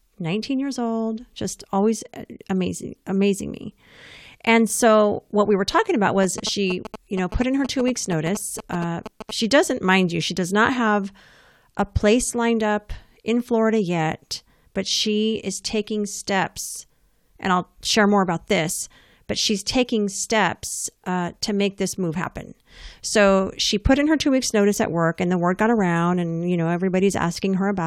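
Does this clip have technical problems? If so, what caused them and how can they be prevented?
Yes. From 6.23 to 9.31 s, between "we were talking about" and "she doesn't mind you", GSM signalling bursts break through as a galloping dit-dit-dit of short buzzes, roughly 10 dB below the speech. A nearby 2G phone's radio pulses, repeating at 217 Hz, are rectified by the audio circuit. A spectrogram shows stacked 217 Hz harmonic lines in brief clusters, and the waveform shows groups of sharp spikes. To prevent it, keep mobile phones away from the recording chain or switch them to airplane mode.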